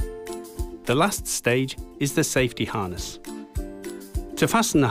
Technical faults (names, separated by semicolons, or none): none